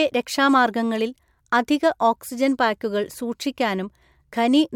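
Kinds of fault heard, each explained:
No faults detected on listening; nothing to list.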